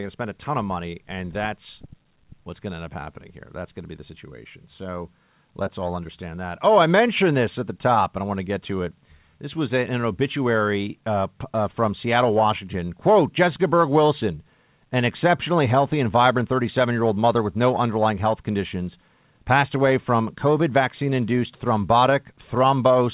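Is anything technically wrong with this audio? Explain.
No, nothing is technically wrong with this audio.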